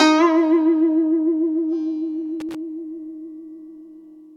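A music recording with a brief loose connector crackle from 2.40 to 2.55 s: an irregular scratchy burst lasting about 0.14 s as a worn contact chops the signal. Unlike evenly spaced digital clicks, the bursts are erratic and clustered.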